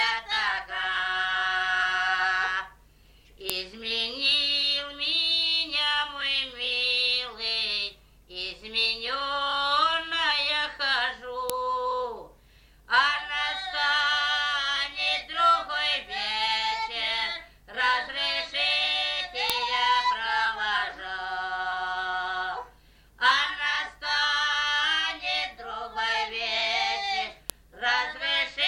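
Separate WAV pieces, each 8 s long, were joined or streamed without their headers being stripped, so the header bytes play back as samples. That is heard as a file header played as audio: a sharp, loud click or snap at 3.50, 11.50, 19.50 and 27.50 s. The clicks fall on a strict 8-second grid, marking where each piece begins, and they arrive regardless of what the underlying sound is doing at that moment.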